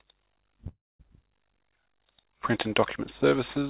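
Audio carried over a call link, with nothing above 4 kHz and the grainy coding noise that fits a G.711 A-law codec at 64 kbps. From 0.68 to 1.01 s the sound stalls into a fading buzz and then about 0.23 s of silence, filling 314 ms. This is a call audio freeze, likely from delayed packets draining the jitter buffer, after which playback resumes where it stopped. At 1.09 to 1.12 s the audio skips ahead, jumping abruptly with only a 6 ms join and losing roughly a fifth of a second, as a dropped stretch is bypassed. From 1.53 to 2.69 s, and again from 3.29 to 3.64 s, the sound drags at unchanged pitch, running at 94% and then 89% speed and adding 68 ms and 50 ms. This is jitter buffer slow-down, where repeated pitch periods rebuild the reserve.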